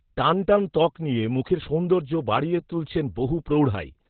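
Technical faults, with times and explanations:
Throughout, Opus voice compression: the speech is cut off near 4 kHz, so it sounds muffled and boxy, and the voicing comes out hoarse and faintly robotic. The coarse excitation points to Opus running in its SILK mode at a very low bitrate, which fits about 8 kbps in narrowband. A plain low-pass filter or telephone band limit would dull the sound the same way but would not add this rough, buzzy, synthetic texture to the voice.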